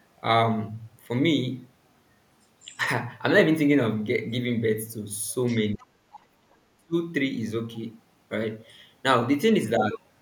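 A faint second voice surfaces at 2.63 to 2.77 s and again at 5.47 to 5.56 s, well below the main speech, roughly 25 to 30 dB down. This is other side's voice leaking through, likely the far end playing on a loudspeaker and escaping the echo canceller. From 5.75 to 5.98 s the speech dips sharply, by around 30 dB. Within that dip, at 5.79 to 5.86 s, another faint scrap of the other voice slips through. From 6.16 to 6.95 s the speech sinks much deeper, by around 40 dB. This is speech suppressed in double talk: both sides were likely talking at once, and the canceller pulled the wanted speech down along with the echo.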